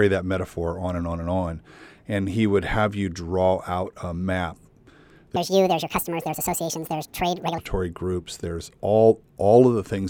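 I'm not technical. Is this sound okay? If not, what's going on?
No. From 5.36 to 7.58 s, a section at the wrong speed runs 1.82 times fast. The speech turns high and rushed, likely from a wrong clock.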